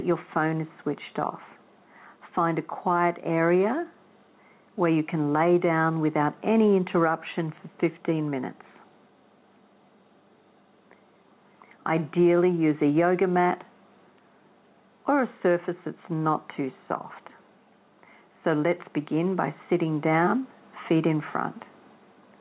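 Gain pumping runs throughout: the gain ducks by around 5 dB under loud sounds, likely from excessive input gain reined in by a fast limiter, all within a band stopping at 4 kHz.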